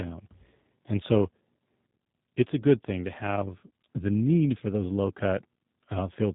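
Speech passed through a G.729 codec, here the G.729A variant running at 8 kbit/s, and the damage is plainly audible for the whole clip. The coder throws away the waveform and resynthesises the speech from a vocal tract filter, a pitch predictor and a sparse set of pulses per 10 ms frame. Nothing above 4 kHz survives, so the sound is dull and band-limited, with a rough, slightly synthetic buzz over every syllable.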